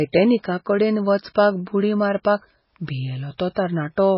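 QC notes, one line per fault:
Throughout, MP3 compression: the speech has a watery, swirly quality with metallic chirps on s sounds, and nothing survives above 5.6 kHz. This is likely from a low-bitrate MP3 encode, near 16 kbps, where weak frequency lines are zeroed frame by frame; a spectrogram shows a flat ceiling at 5.6 kHz and speckled, blinking patches below it.
1.34, 3.38 and 3.55 s, pre-echo: each attack is preceded by a short hiss lasting 14 to 16 ms and sounds smeared, because the codec spreads noise sized for the loud onset across its whole block, into the quiet just before. Waveforms show a low noise smear leading each transient.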